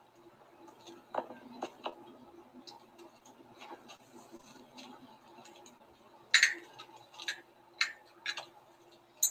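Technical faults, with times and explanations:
1.89–1.94 s, 3.19–3.23 s and 5.78–5.82 s: short concealed packet loss. About 20 ms never arrived each time. The decoder extended the preceding sound, heard as a brief smear or wobble. On a spectrogram it is a short horizontally smeared patch; on the waveform, a copied repeating cycle.
3.97–4.48 s: repeated packet loss (robotic sound). Four separate gaps, the longest 24 ms, were each patched by continuing the last sound, giving a choppy stutter. The spectrogram shows several smeared slivers; the waveform shows recurring duplicated segments.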